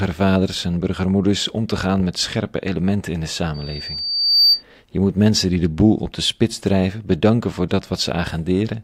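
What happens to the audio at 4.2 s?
At 4.2 s the speech is overtaken by loudspeaker feedback squeal, which runs from 3.54 s to 4.63 s. A microphone is hearing the loudspeaker it drives, and at 4.6 kHz the loop gain exceeds unity, so that frequency reinforces itself on each pass. The result is a narrow, piercing tone that swells over roughly a second and peaks around 5 dB above the speech before it stops at 4.63 s.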